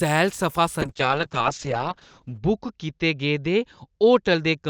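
Call bitrate drop from 0.82 s to the end: the encoder, starved of bits (roughly 64 down to 7 kbps), codes coarsely, so the sound turns watery and loses everything above 8 kHz.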